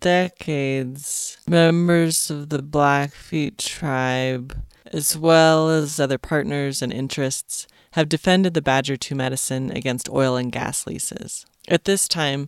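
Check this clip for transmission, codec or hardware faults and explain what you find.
One fault: a time-stretched section from 0.0 to 6.0 s, where speech runs at 0.5x pace with pitch unchanged. Likely caused by software repeating short pieces, it drags, with spectrogram harmonics level but syllables drawn out twice as long.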